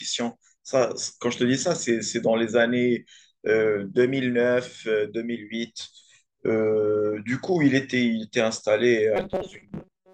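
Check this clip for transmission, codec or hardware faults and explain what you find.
One fault is present: robotic sound from repeated short buffers, from 9.16 s to the end at 10.13 s. New audio likely arrived too slowly, so about half the time was filled by replaying a roughly 5.3 ms fragment. That loop imposes a fixed 188 Hz pitch, turning the speech into a metallic buzz.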